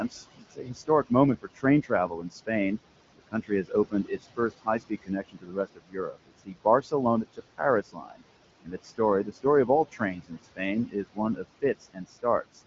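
Noise suppressor artifacts run throughout: the steady room noise is pushed down by about 19 dB between phrases and returns under speech, leaving a patchy, flickering noise floor on a spectrogram. Speech cut by the noise suppressor occurs at 0.1–1.11 s, 1.42–2.49 s, 3.18–8.23 s and 8.61–12.61 s, dips reaching about 19 to 22 dB, with soft consonants and word tails swallowed. On the waveform these show as abruptly shrunken segments, roughly two seconds total in the longest span, under wideband coding that stops near 7.5 kHz.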